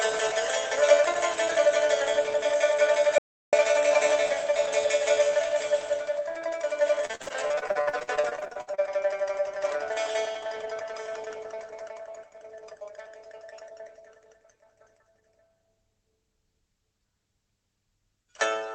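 The audio cuts abruptly to complete silence from 3.18 to 3.53 s, about 0.35 s with no room tone at all, before resuming mid-flow. This is an audio dropout to silence, likely from the input briefly disconnecting or muting while the recorder kept writing silence. From 7.05 to 8.80 s the sound turns choppy, breaking up with many short holes, the longest about 60 ms. This is repeated packet loss (robotic sound). Roughly 0.74 s of audio never arrived, and about 42% of that stretch is patched by stretching out the preceding sound rather than by real signal. Both faults pass through a WebRTC call path whose content stops at about 8 kHz, which fits a low-bitrate Opus call.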